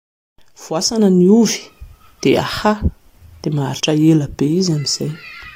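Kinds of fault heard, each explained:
Compressed frames skipped: about two 23.2 ms compressed frames at a time were missing or rejected as damaged by the decoder, so the speech jumps ahead roughly 50 ms at 0.98 s and at 3.79 s.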